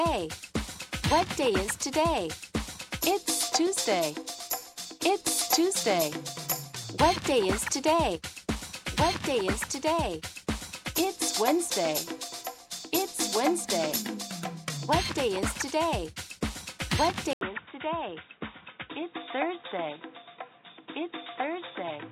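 At 17.33 s the sound drops out for about 80 ms, then returns duller and boxier, with nothing above about 3.8 kHz, a level roughly 5 dB lower and a new, faint background noise sitting well beneath it. The change holds to the end of the clip at 22.12 s. This points to an input switched to a poorer device, likely a fallback microphone or a headset's narrow-band call profile taking over mid-recording.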